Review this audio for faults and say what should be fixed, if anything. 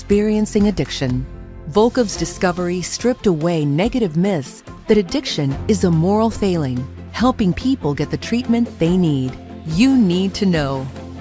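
Nothing here needs fixing; no faults are audible.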